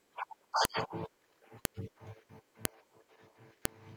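Sharp clicks at 0.65, 1.65, 2.65 and 3.65 s, one per 1.0 s piece, are a file header played as audio: leftover header bytes reproduced as samples.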